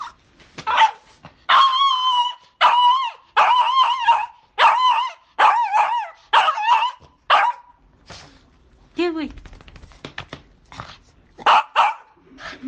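No technical faults can be heard anywhere in these sounds. Nothing in the recording calls for a timestamp or a closer listen.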